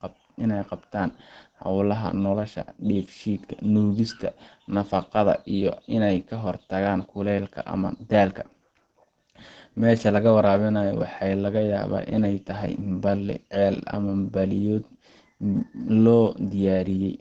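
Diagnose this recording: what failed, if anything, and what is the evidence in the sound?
Codec stage: throughout the speech, nothing sounds above about 8.8 kHz, and the sound is muffled and hoarse, with plainly audible damage. This is likely Opus compression in its SILK speech mode, consistent with roughly 16 kbps. Unlike MP3, Opus in its music mode leaves few spectral holes and swirls less.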